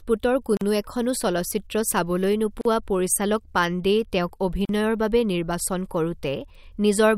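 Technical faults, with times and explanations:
0.57–0.61 s, 2.61–2.65 s, 4.65–4.69 s: gap at a join of encoded pieces. Silences of 40 to 43 ms recur every 2.0 s, just before "এখনো চলচ্চিত্ৰ" and "পৰিচালক পাণ্ডেই". Untrimmed encoder delay and end padding remain at each join. Each gap shows as a flat waveform dropout and a blank vertical stripe with smeared edges.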